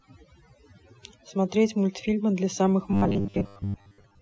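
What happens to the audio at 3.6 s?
At 3.6 s you're in the robotic sound from repeated short buffers, running 2.91 to 4.21 s: a rigid, metallic 100 Hz buzz, likely from 10 ms chunks being replayed while most of the real audio gets skipped. Overdone noise removal also runs under it, throughout, with the background dropping and breaking up into twinkling specks.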